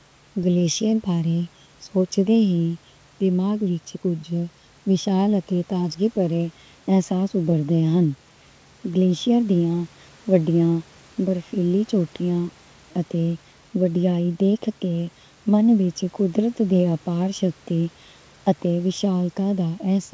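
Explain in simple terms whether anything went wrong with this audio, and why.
One of the two audio channels arrived a fraction of a millisecond later than the other, roughly a third of a millisecond, and the two were then mixed into one. This channel delay causes comb filtering for the whole clip. Where the two copies line up out of step, they cancel, starting around 1.5 kHz and repeating higher up. The speech sounds hollow and phasey, as if heard through a tube, though the call connection's normal cutoff at 8 kHz is unrelated.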